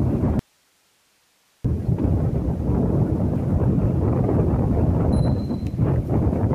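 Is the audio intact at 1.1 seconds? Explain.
No. An audio dropout to a faint residue runs from 0.39 to 1.65 s, leaving only hiss far below the signal, likely a signal loss while the downstream path stayed live.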